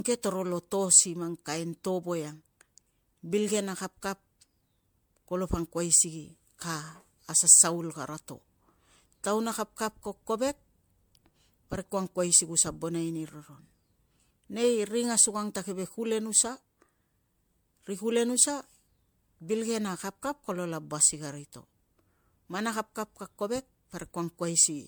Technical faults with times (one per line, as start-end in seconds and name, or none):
0.00-24.87 generation loss